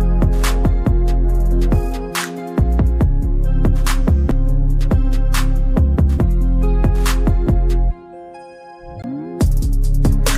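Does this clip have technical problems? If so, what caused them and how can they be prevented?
Yes, there are two CD skips, at 4.31 s and 9.02 s. At each, the laser jumped to a different turn of the disc's spiral, so the player muted briefly (a few milliseconds at 4.31 s, about 20 ms at 9.02 s) and resumed from another point, giving a tick and an abrupt jump in the sound. On a waveform this is a short flat gap or sharp discontinuity, and on a spectrogram a thin vertical broadband line with mismatched content on either side. Prevention: play a clean, undamaged disc on a stable, vibration-isolated player, or rip it with error-checking software.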